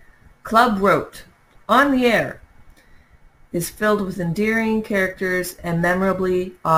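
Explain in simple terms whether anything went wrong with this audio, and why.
Yes, something went wrong. The speech carries a thin, metallic fizz sitting on top of it from start to finish. That's imaging from sample-and-hold upsampling. Somewhere along the way the audio was converted to a higher rate by simply repeating each sample, with no smoothing afterwards, which fits a 24 kHz original raised to 44.1 kHz. That leaves a mirrored ghost of the speech between 12 and 24 kHz, and it gets louder and quieter right along with the talking.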